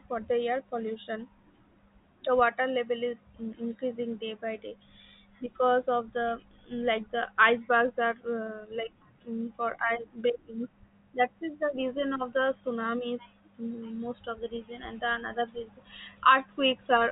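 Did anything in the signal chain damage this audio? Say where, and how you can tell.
No, nothing in the signal chain has damaged this speech. It has passed through G.711 telephone coding, which can be heard as a band limit with nothing above about 3.8 kHz, as expected of a fixed-line telephone path.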